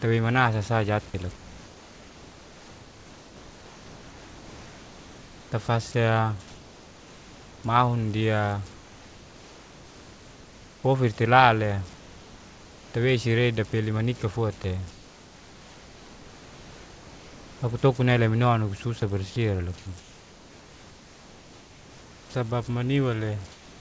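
Converter idle tones run through the whole clip. A faint whistle sits near 1 kHz, about 25 dB below the signal. It is clearest in pauses. Without dither, the converter settles into repeating bit patterns on small inputs, and those patterns make the tone.

Comfort noise in place of the background appears from 1.36 to 5.52 s, 6.48 to 7.64 s, 8.74 to 10.84 s, 11.96 to 12.94 s, 14.92 to 17.62 s, 19.78 to 22.34 s, and 23.52 s to the end. The real room noise gives way to flat, featureless hiss, about 2 dB quieter. Likely, the sender stopped transmitting and the receiver synthesised noise.

At 14.62 to 14.64 s, sound is dropped by the voice detector. About 10 ms of speech vanishes into steady noise. The detector probably judged that quiet moment to be background. The band stops at 8 kHz, which fits a G.722 call path.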